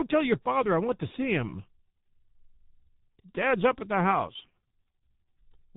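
From start to finish the speech carries heavy G.723.1 codec damage. Nothing above about 3.8 kHz survives, so the top octave of the voice is missing and sibilants lose their edge. The codec rebuilds the voice from a coarse model refreshed only every 30 ms frame, which leaves the tone hoarse and muffled and smears consonant onsets together. The degree of damage fits the higher-rate mode at about 6.3 kbit/s.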